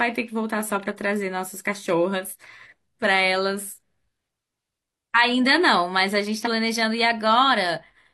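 At 2.28 to 2.33 s, and again at 6.42 to 6.48 s, the speech skips ahead because compressed frames were skipped: whole blocks of coded audio never reached the output. The frame length of 42.7 ms fits a 2048-sample frame at 48 kHz. The first jump drops about one frame, roughly 40 ms. The second drops about three, nearly 150 ms.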